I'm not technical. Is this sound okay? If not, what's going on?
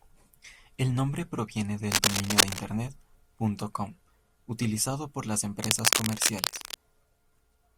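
No. Cable scratch noise appears from 1.92 to 2.59 s and again from 5.63 to 6.74 s: bursts of scratchy rustling over the speech, louder than the speech at first and about as loud later. The likely cause is a worn cable or connector being moved and briefly losing good contact.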